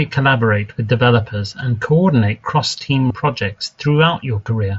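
It's a short speech clip with two brief dropouts patched by concealed Bluetooth headset packet loss. At 3.08 to 3.10 s and again at about 4.44 s, roughly 22.5 ms of audio went missing between headset and phone, which fits a run of about three lost packets. The receiver filled each gap by repeating the best-matching stretch of recent waveform, so you hear a short, buzzy held tone with a little warble as the real audio picks back up. It all goes through the mSBC headset codec, which keeps speech to an 8 kHz top end with a light grain on louder sounds.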